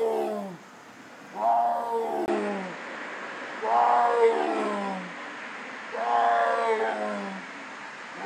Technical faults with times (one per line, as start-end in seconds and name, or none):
2.26-8.26 input switched to a poorer device